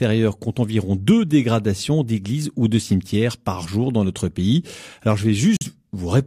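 At 5.57 to 5.66 s the speech hits a digital broadcast dropout: the receiver rejected incoming data and muted, with a 3 ms fade to silence, consistent with one lost frame of about 43 ms.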